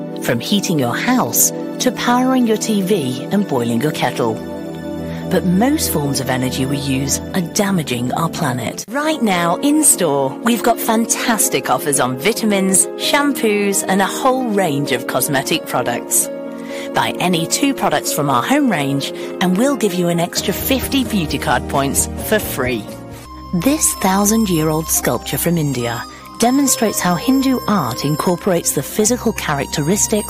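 Hard clipping runs through the whole 30-second sound: the level is pushed about 7 dB past what a stage could pass, so peaks get sliced flat. Only a small fraction of samples, under one percent, hit the ceiling, so it comes through as crackle on the loudest moments rather than constant fuzz.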